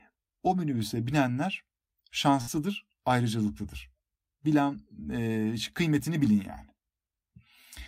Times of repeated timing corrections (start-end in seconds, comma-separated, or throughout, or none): none